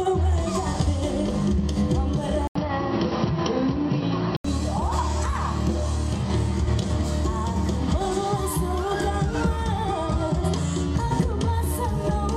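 Around 2.47 s the sound drops out for 80 ms, then turns dull with nothing above 5.7 kHz and a fresh noise floor, likely an input switched to a poorer device, until 4.44 s.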